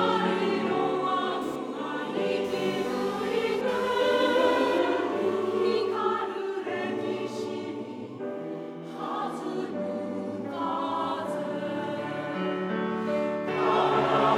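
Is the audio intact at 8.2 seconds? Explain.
Yes, the audio at 8.2 seconds is intact, with no dropout, click, distortion or other fault at that point.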